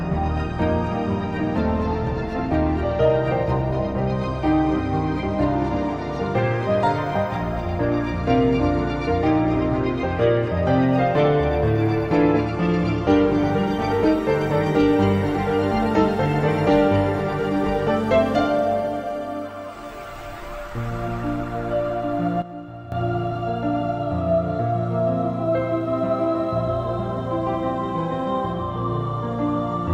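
A digital gain setting likely changed from one sample to the next with no ramp, giving a sudden gain jump at 22.42 s: the audio and its background noise drop together by about 12 dB, then return at 22.92 s, half a second later.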